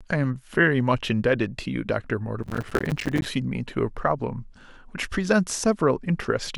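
From 2.43 to 3.26 s the speech picks up a burst of processor overload crackle, a gritty tearing laid over the sound for a bit under a second. What's happening is the machine falling behind on its tiny audio buffers, around 5 ms each, and missing dozens of deadlines back to back. Every miss drops in a short stretch of silence with hard edges, and all those clicks pile up into the crackle until the load eases.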